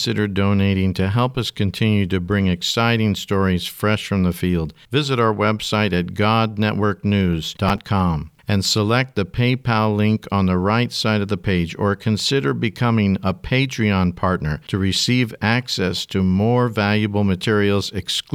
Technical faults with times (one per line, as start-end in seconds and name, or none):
7.69-7.86 processor overload crackle